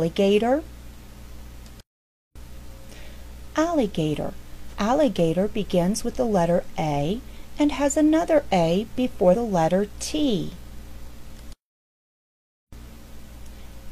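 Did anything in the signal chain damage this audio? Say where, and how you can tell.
Yes, at the codec stage: compressed frames were skipped. At 4.65 to 4.74 s and 9.29 to 9.35 s the audio jumps ahead by roughly 50 ms, because whole compressed frames were not played.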